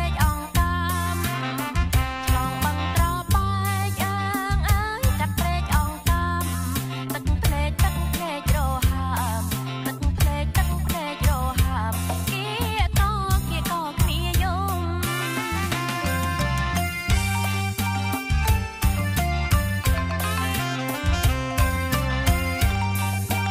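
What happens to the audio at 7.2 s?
Nothing goes wrong at 7.2 s; the audio plays through that moment intact, with no audible fault.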